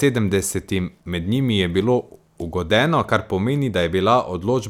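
Nothing goes wrong anywhere in this speech recording, so there's no fault to point to at any moment.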